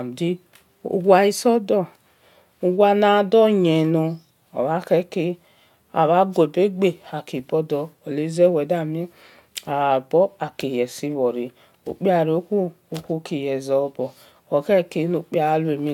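No technical faults can be heard anywhere in the speech recording.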